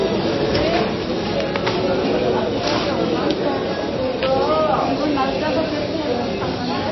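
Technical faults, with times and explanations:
Throughout, MP3 compression: the sound has a hard ceiling near 5.8 kHz and a watery, swirling texture. That points to a low bitrate, likely around 24 kbps. On a spectrogram the top is cut flat and weak detail flickers in and out between frames.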